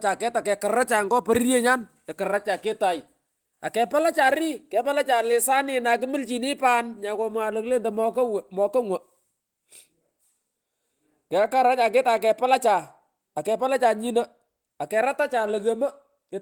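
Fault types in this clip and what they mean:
No faults can be heard anywhere in this speech recording.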